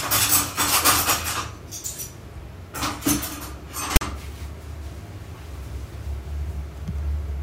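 At 3.96 s there's a short, hard-edged burst of static that runs to about 4.01 s, so roughly 50 ms. That's file tags played as audio: a block of text metadata got fed to the decoder as if it were sample data. The text bytes come out as a loud, lopsided rasp pushed off to one side of zero, and the zero padding in the block drops to dead silence before the sound picks back up.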